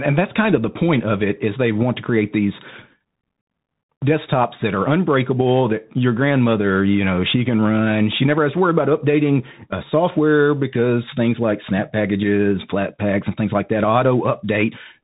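From start to finish the speech is boxed in and dull, with scratchy s sounds, a grainy hiss underneath and roughness on loud bright moments. This is the Bluetooth CVSD headset codec, which fits a 64 kbps one-bit stream: nothing above 3.8 kHz survives, and the adaptive step cannot keep pace with sharp high-frequency energy.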